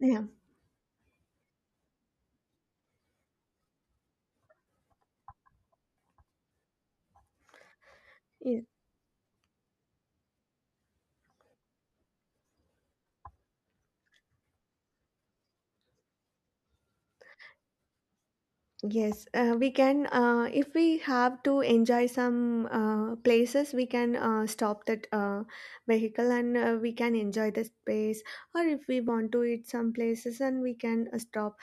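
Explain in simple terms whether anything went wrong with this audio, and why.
There's a steady tick running through the speech, a click roughly every 2.11 seconds from about 1.65 s to 31.19 s, around fifteen in all. That's likely clock drift buffer slips: two devices' clocks disagree slightly, so every so often a tiny sliver of sound gets dropped or repeated.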